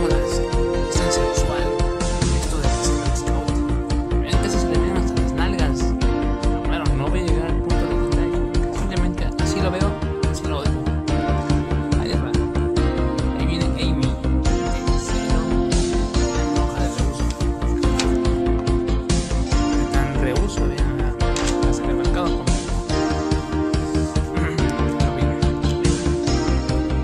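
No technical faults can be heard anywhere in this clip.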